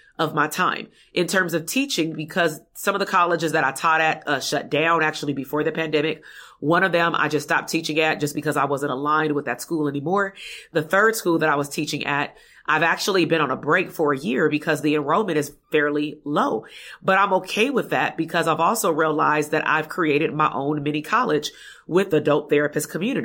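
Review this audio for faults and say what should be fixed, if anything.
Nothing in the speech signal calls for a fix: the level stays steady and the signal path holds up throughout the recording with no dropouts, distortion or timing problems to be heard.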